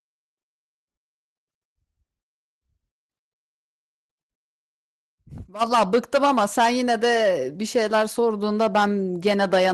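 No technical faults can be heard anywhere in the speech.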